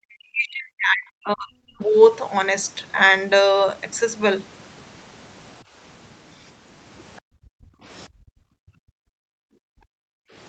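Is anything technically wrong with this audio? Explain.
Yes, there are a few echo-canceller problems in this call recording, all in the speech.

Speech suppressed in double talk shows up right from the start, 0.0 to 1.82 s, where the talker drops away sharply, roughly 40 dB at the worst point, for most of those first two seconds. There's a much shorter version at 7.67 to 7.71 s, a dip of around 30 dB. The likely cause is both sides talking at once: the canceller couldn't separate the near talker from the loudspeaker echo, so it pushed everything down.

The other side's voice leaking through is a tiny scrap at 7.17 to 7.21 s, sitting very low, something like 35 dB under the talker. It's most likely far-end audio from the loudspeaker that the canceller didn't fully scrub out of the mic before it clamped down.

Background gated by the echo canceller follows right after that leak, 7.21 to 7.39 s, where the room sound falls away by about 40 dB. 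It happens again, much longer, from 8.08 to 10.35 s. In both spots the canceller reacted to loudspeaker playback by slamming the mic down hard, so the ambience drops out and then returns once it lets go. Across the whole clip the audio also stops at 8 kHz, which is just the call path's bandwidth.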